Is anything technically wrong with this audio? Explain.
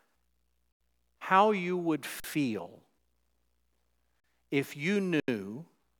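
Yes, there are four short dropouts, all an underrun with held sample. The speech freezes from 0.72 to 0.80 s, from 2.20 to 2.24 s right after "how you would", from 4.20 to 4.24 s just before "if you", and from 5.20 to 5.28 s right after "if you". Each time the output buffer ran dry, so the converter held its last value and the waveform went flat at that level for 40 or 80 ms. The sound just stops without a click. Since essentially nothing was lost, playback picks up where it left off and the return is soft.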